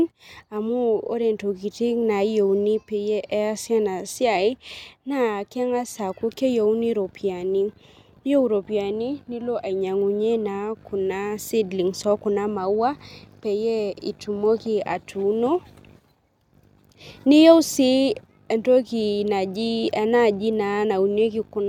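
No technical faults can be heard anywhere in the recording.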